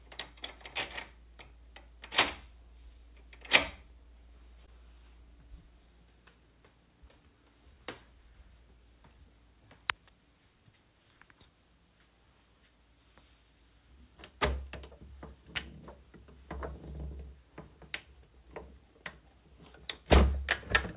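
At 4.66 to 4.69 s, a short concealed packet loss: 20 ms never arrived and was patched by extending the preceding sound, heard as a brief smear.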